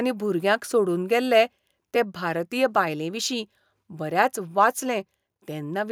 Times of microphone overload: 4.61-4.64

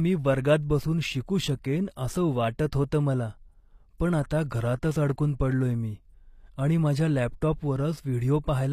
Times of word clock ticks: none

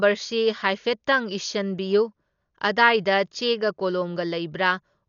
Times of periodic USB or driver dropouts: none

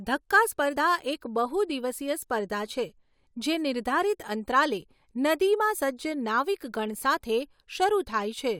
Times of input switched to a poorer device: none

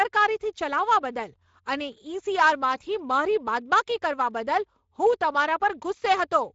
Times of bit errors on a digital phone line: none

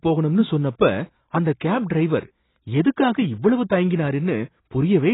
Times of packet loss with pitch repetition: none

